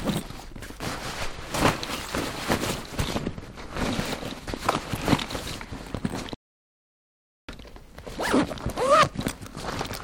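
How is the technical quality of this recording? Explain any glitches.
There is one clear glitch. Audio dropout to silence occurs from 6.34 s to 7.49 s, removing about 1.14 s of the recording. The input was likely lost at that moment, through a disconnection, a failed link or an accidental mute, while the recorder kept writing silence. The sound stops abruptly mid-flow, and the gap is dead silence with no background or room tone. It then cuts back in just as suddenly, and whatever happened during that second is gone.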